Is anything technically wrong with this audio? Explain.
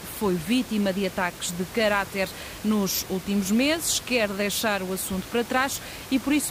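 No, nothing is technically wrong with this audio.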